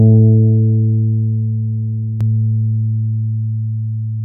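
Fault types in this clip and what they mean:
doubled audio track: from about 2.2 s to the end, a second full-level copy trails roughly 0.7 s behind, likely from a duplicate capture path.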